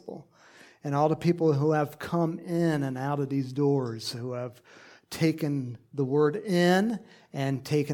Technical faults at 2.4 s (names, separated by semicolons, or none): none